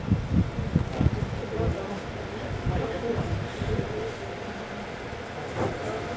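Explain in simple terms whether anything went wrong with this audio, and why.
Loose connector crackle, from 0.79 to 1.12 s: a worn or dirty contact kept connecting and disconnecting, chopping the sound into a short, irregular burst of scratchy crackle.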